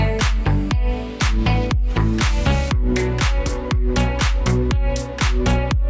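No technical faults can be heard anywhere in the signal.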